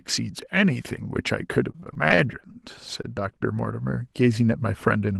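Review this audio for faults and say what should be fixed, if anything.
From 1.71 to 2.56 s the speech breaks up with repeated packet loss, giving a robotic sound. Eight gaps, the longest 26 ms, are each patched by extending the previous sound. About 80 ms is lost outright. On a spectrogram this shows as smeared, flat harmonic stripes broken by small notches. More jitter-buffer headroom or forward error correction would prevent it.

At 3.02 to 3.14 s a short stall from a late packet holds one sound 18 ms too long while the jitter buffer waits, and nothing is lost. The waveform shows a briefly repeated, slightly dipping cycle. A steadier network path or adaptive buffer targets would prevent it.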